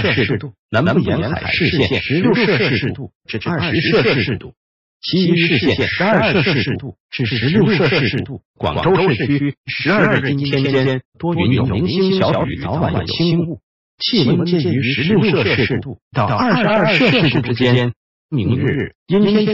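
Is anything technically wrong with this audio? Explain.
Yes. A doubled audio track runs through the whole clip: a second full-band copy of the sound sits roughly a tenth of a second behind the first, at about the same level. It most likely comes from the signal being captured twice, once through a slower path, or from an edit that left two copies out of step. Every onset is followed by a hard, dry repeat with no decay or room colour, so transients smear into a flam-like slapback.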